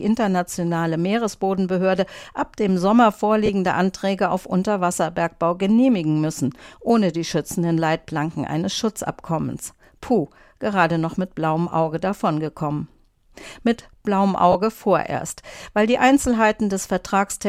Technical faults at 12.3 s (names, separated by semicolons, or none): none